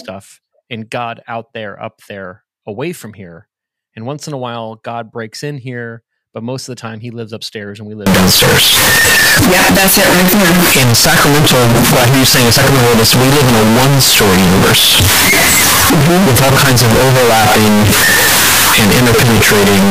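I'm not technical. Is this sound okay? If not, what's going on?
No. From 8.06 s to the end at 19.90 s, the speech turns into a blaring, buzzy roar, likely float read as integer: 32-bit float samples read back as 32-bit integers. Unlike ordinary clipping, even background noise becomes as loud as the speech, yet the pitch still comes through.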